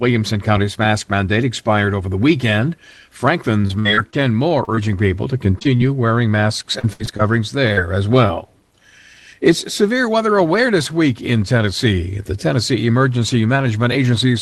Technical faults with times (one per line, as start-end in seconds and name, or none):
3.61-4.79 repeated packet loss (robotic sound)
5.59-5.81 short concealed packet loss
6.79-8.31 repeated packet loss (robotic sound)